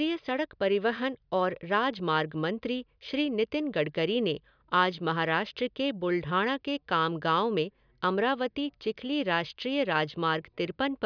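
Nothing in the recording stood out as a technical fault on listening.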